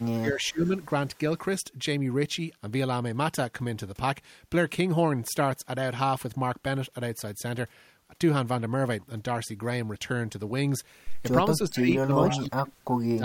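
A speech recording in which a far-end echo canceller is likely letting part of its loudspeaker pickup return, an echo leak: a copy of the voice delayed by 424 ms surfaces in short scraps at 0.0–0.05, 0.4–0.49, 0.65–0.86, 11.76–11.82 and 12.25–12.39 s, climbing from about 40 dB below the speech to about 10 dB below it. The same canceller, unable to tell the local talker from the echo when both are active, is likely ducking both, so the speech is suppressed in double talk: from 0.17 to 0.74 s the voice dips by up to roughly 20 dB, and from 11.7 s to the end it sinks by as much as roughly 30 dB.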